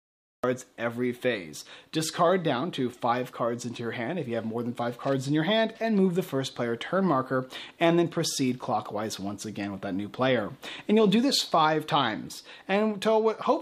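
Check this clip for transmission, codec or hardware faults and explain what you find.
One fault is present. Cut-off start at 0.44 s: capture began late, so digital silence jumps straight into a sound already underway, with no attack or fade-in.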